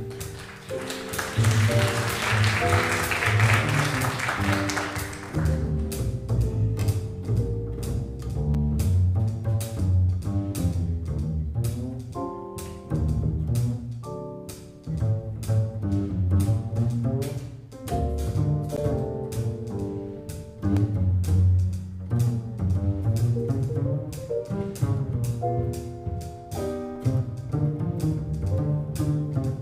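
At 5.35, 8.54, 18.77 and 20.77 s the sound drops into a block of digital silence lasting 5.8, 5.8, 11.6 and 1.25 ms; the first three fit missed 256- and 512-sample buffers. Each is short enough to be heard as a tick or dip rather than as silence. On the waveform these show as flat runs; on the spectrogram, as thin vertical broadband lines.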